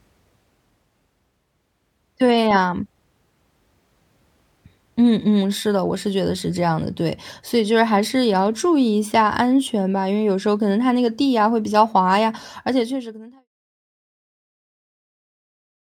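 No technical faults are audible; the speech fades out smoothly.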